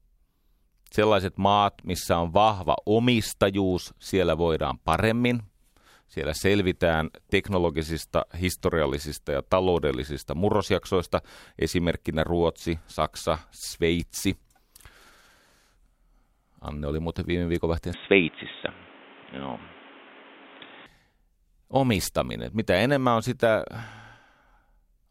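From 17.94 to 20.86 s, just after "oli muuten viime viikonvaihteen", the speech turns boxy and dull with no gap, likely an input switched to a poorer device. A spectrogram shows energy cut off above 3.8 kHz, a new noise floor about 30 dB down, and the waveform shifts in level by about 5 dB.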